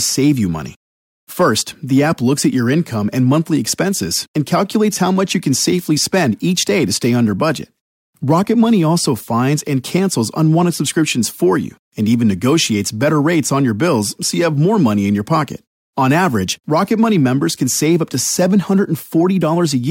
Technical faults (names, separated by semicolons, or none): none